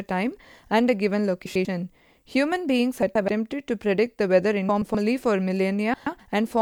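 This speech clip has frames out of order four times: 1.46 to 1.65 s, 3.02 to 3.29 s, 4.69 to 4.95 s and 5.94 to 6.20 s. Each time, two adjacent blocks swap places. The first span uses blocks of 96 ms, the others 128 ms. This fits swapped runs of three or four frames. The speech turns into a brief garbled flutter. No time is lost.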